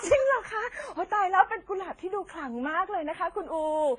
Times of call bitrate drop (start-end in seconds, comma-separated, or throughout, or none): none